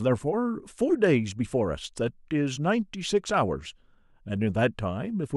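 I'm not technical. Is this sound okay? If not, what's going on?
Yes, it's fine: nothing in this recording sounds broken or glitchy, so there's nothing to worry about.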